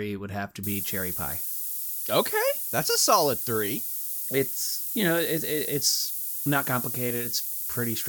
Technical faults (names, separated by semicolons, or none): low bit depth with noise shaping